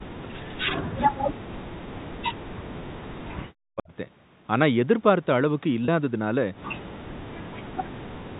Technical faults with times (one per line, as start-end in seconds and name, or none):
0.00-1.36 speech suppressed in double talk
1.61-3.91 speech suppressed in double talk
5.85-5.88 packet loss with pitch repetition
6.83-8.38 speech suppressed in double talk